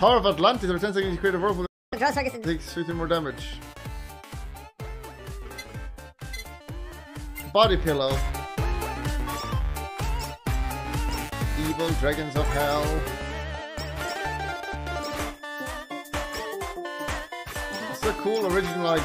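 At 1.66 s the sound cuts out abruptly, in mid-flow. Silence holds until 1.93 s, a gap of about 257 ms. This is a playback stall. The output went dead for that quarter of a second, most likely because the player ran short of data or its thread was held up. Nothing is heard during the gap. Then the sound returns.

From 1.93 s to 2.45 s comes a catch-up at higher speed. The player races through its backlog by resampling at 1.5 times normal rate. Because resampling changes speed and pitch together, everything in this half-second sounds hurried and shifted up by roughly seven semitones, close to a musical fifth. The effect is a brief chipmunk-like rush. At 2.45 s the lost time is made up, and speed and pitch drop back to normal at once.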